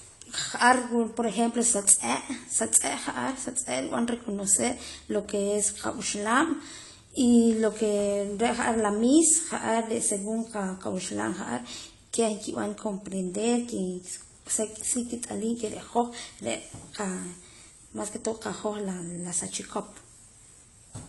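From start to finish, the speech carries plainly audible AAC compression damage, most likely from AAC-LC at a low bitrate near 32 kbps: nothing above 11.5 kHz, smeared sibilants and a watery warble. That warble and fizz set it apart from a simple low-pass filter, which only dulls.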